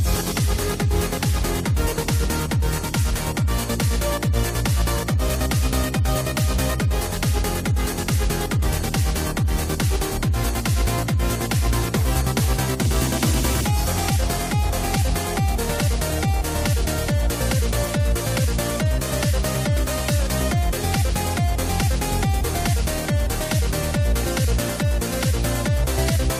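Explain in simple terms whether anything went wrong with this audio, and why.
Nothing went wrong here: listening all the way along, there's no dropout, glitch or distortion to point to, so there's nothing to explain away.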